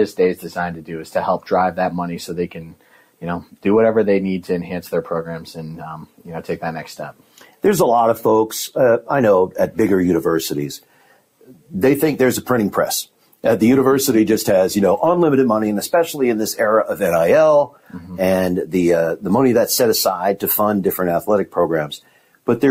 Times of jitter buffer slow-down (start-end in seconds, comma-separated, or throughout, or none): none